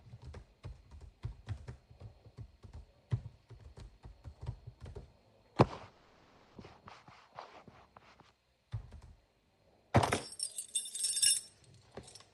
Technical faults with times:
5.90-6.56 call audio freeze

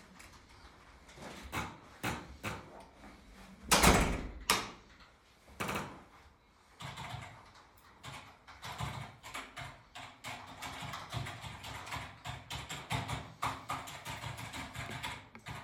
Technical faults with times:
none

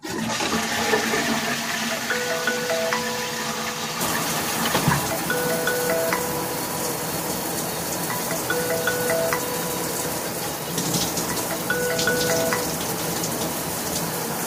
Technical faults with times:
none

